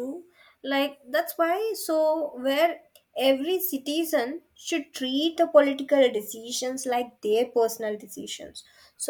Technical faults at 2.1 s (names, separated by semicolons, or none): none